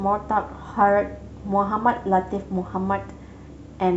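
Nothing technically wrong turns up anywhere in this short bit of speech, so there's really no problem to point to.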